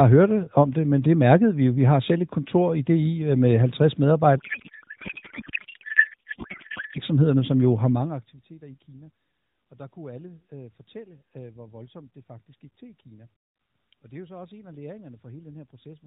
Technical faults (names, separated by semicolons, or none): codec payload misread